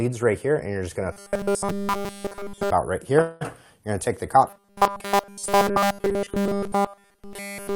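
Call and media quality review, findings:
Robotic sound from repeated short buffers, 1.12–2.70 s. Likely cause: audio delivered too rarely, so the playback side loops the last 5 ms chunk while fresh audio is discarded. Nearly all sound replaced by repeats; rigid metallic 200 Hz buzz tracking the original only loosely.

Robotic sound from repeated short buffers, 4.50–7.76 s, running to the end of the clip. Same mechanism: 5 ms loop replaces nearly all real audio, imposing a fixed 200 Hz buzz.

Call audio freeze, 3.21–3.43 s. Packets held up in transit and the jitter buffer likely ran dry. Receiver extended the last sound, fading, for 194 ms, with no silence. On recovery, audio resumes where it stopped; nothing lost, but playback now runs 194 ms later.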